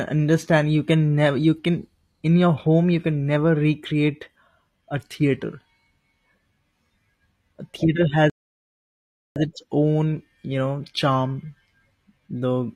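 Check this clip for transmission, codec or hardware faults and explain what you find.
There's one fault in this speech clip, a rebuffering stall from 8.30 to 9.36 s. The player used up the audio it had downloaded and simply paused until more came in. You hear the speech drop to silence for a bit over a second, about 1.06 s, then carry on from exactly the point where it stopped. Nothing goes missing; the clip just runs that much longer.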